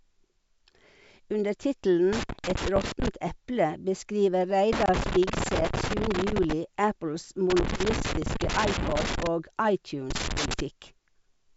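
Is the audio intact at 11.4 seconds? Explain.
Yes, the speech at 11.4 seconds is intact, carried cleanly by G.722 wideband telephone coding at 64 kbit/s.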